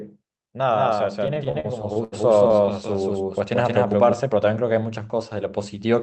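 A doubled audio track runs from 0.72 to 4.13 s: a second, equally loud copy of the speech trails about 200 ms behind, dry and abruptly switched, likely from a slower capture path. Repeated stalls (stutter) follow from 1.27 to 2.70 s, when late packets emptied the jitter buffer about a dozen times. The receiver stretched the last sound over roughly 283 ms in total, the longest hold being 81 ms, so the speech drags and stutters without losing anything.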